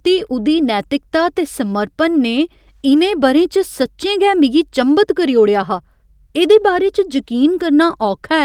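No technical faults can be heard anywhere in the recording. Nothing in the speech points to a problem along the recording or playback chain.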